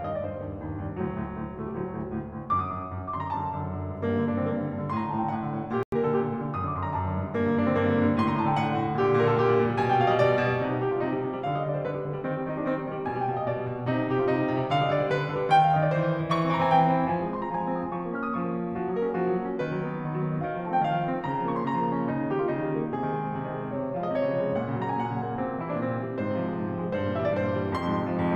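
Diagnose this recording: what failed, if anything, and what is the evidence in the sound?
At 0.37 s there is a single brief error, peaking at only about -42 dBFS. This is a corrupt FLAC frame: bits in the stored stream were flipped and the decoder played the frame without rejecting it on its checksum. From the damaged bit onward, the frame's prediction ran on wrong values, producing the error. The event is confined enough to point to one damaged frame. The next frame decodes cleanly.

From 5.74 s to 5.93 s the music drops out abruptly into silence for about 0.18 s, then resumes with no shift in timing. This is a corrupt frame muted at the codec stage: damaged compressed frames failed the decoder's check, were refused, and the player substituted silence of equal duration. The length of the hole fits two consecutive frame lengths. The music picks up on schedule after the gap.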